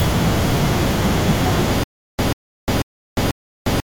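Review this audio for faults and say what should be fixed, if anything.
From 1.84 s onward, a 139 ms fragment repeats four times between 353 ms silences. This is stutter with silent gaps, likely from a stalled stream replaying its buffer. Re-record or re-export that section, and give playback enough buffering to prevent stalls.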